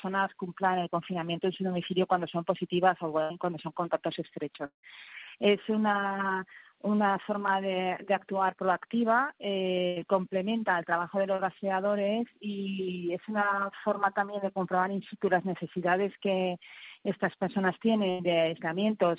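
The audio comes through a narrowband call path with nothing above 4 kHz, which fits a G.711 mu-law link at 64 kbps. Bursts of packet loss occur at 3.22–3.32 s, 9.87–9.98 s and 18.11–18.21 s. Each time, roughly 80 to 100 ms of audio never arrived. The receiver stretched the last sound into a fading buzz or hiss for 78 to 92 ms, then jumped ahead with that stretch missing. At 4.66–4.85 s the sound holds as a decaying tail and then goes silent for about 110 ms before resuming with roughly 180 ms gone, most likely a long network dropout. Short concealed packet loss appears at 11.36–11.40 s and 14.26–14.30 s. About 20 ms failed to reach the decoder in time in each case, and brief extrapolated patches of 23 and 15 ms bridge them, heard as a quick smear or wobble where the audio blends back in.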